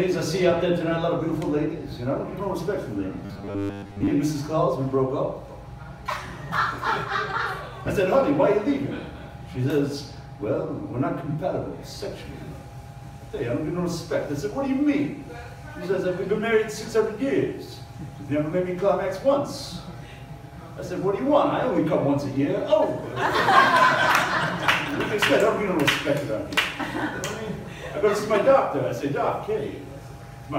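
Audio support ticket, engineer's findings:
Rigid metallic buzz, 3.26–4.11 s, fixed at 100 Hz over the sound's rough contour: robotic sound from repeated short buffers. Playback likely starved. Most of the audio in that span is replaced by re-played copies of the last chunk, with the real material skipped. A 100 Hz repeat rate fits a 10 ms buffer being looped until fresh data arrives.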